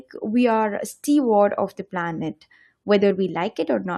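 At 3.10 s, compressed frames are skipped. About one 21.3 ms frame never plays, so the speech jumps ahead.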